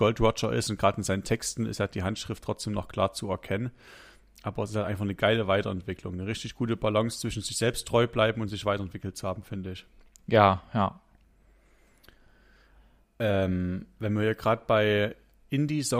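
No technical faults are audible.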